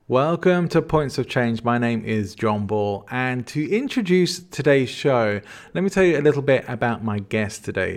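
No technical faults can be heard anywhere in the speech recording. There is nothing to place in time or explain.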